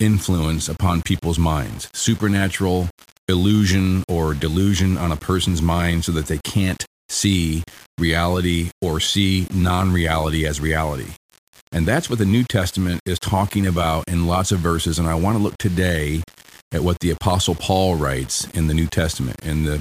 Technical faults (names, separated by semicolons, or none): low bit depth without dither